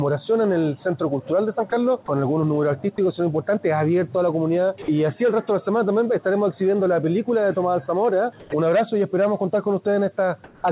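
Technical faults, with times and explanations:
1.70–1.72, 2.06–2.08, 2.96–2.98, 4.82–4.88 and 8.40–8.52 s, sound dropped by the voice detector: the sender's voice detector likely misjudged live sound as background and briefly stopped transmitting, so the receiver filled each gap with synthetic comfort noise. The first three are 20 ms breaks, the fourth lasts 60 ms and the last 120 ms. The signal momentarily gives way to a flat hiss before snapping back, which makes the sound flicker at those points.
10.44–10.64 s, comfort noise in place of the background: the sender likely stopped sending during a pause and the receiver substituted generated noise for the real background for 200 ms. That background sits about 26 dB below the loud passages, and the replacement lands about 4 dB quieter still. Its texture turns smooth and featureless, with a slight dip in level, and all of it is heard through the narrow G.711 band, which has nothing above 4 kHz.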